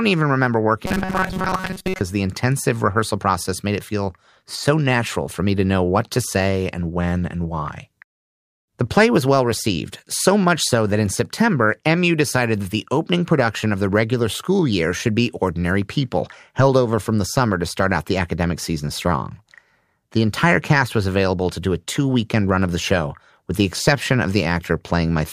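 Speech, with robotic sound from repeated short buffers between 0.86 and 2.01 s, just after "even remember" and before "the intensive rehearsal process". Across that stretch the voice becomes a rigid, metallic buzz at 188 Hz that only loosely tracks the words. The likely cause is audio arriving too infrequently, with the playback path looping a fragment of about 5.3 ms, one period of that buzz, for most of the interval while the real audio is dropped.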